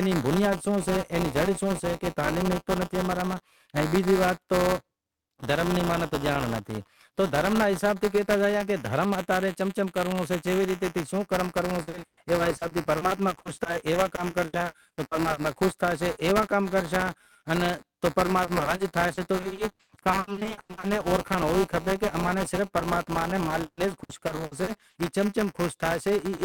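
Buffer tearing runs through the entire speech clip. The writer and the hardware reader of the ring buffer have drifted out of step and cross inside every period, so a small slice of each buffer, a little under a tenth, still holds audio from one lap earlier, about 10 ms old. The hard joins on either side of that stale slice repeat 200 times a second, which fits a 5 ms period. The result is a steady robotic buzz at 200 Hz that sits under the voice and disappears in silence.

Repeated packet loss with robotic sound appears in three stretches. From 11.83 to 15.45 s, 1040 ms of audio is missing across frequent gaps, up to 120 ms long, with about 29% of the span concealed. From 18.25 to 20.85 s, 940 ms is lost, the longest gap is 100 ms, and about 36% is concealed. From 23.45 to 24.97 s, 500 ms is missing, the longest gap is 160 ms, and about 33% is concealed. Each hole is filled by extending the preceding sound, so these passages come out choppy and robotic, with pieces dropping out.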